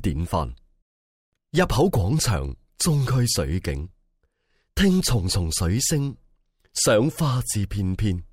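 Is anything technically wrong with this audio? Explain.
No, there is nothing technically wrong with this audio. No faults can be heard anywhere in it.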